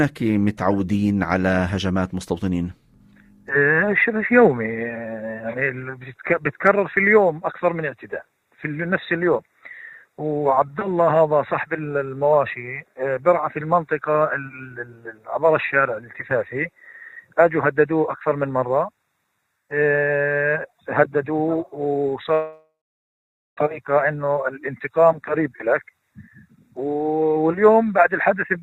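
At 22.33 s the sound smears into a fading buzz, then 0.86 s of near silence, resuming at 23.59 s with about 1.24 s lost: likely a long network dropout. A spectrogram shows decaying smeared bands, then an empty gap; the waveform flattens.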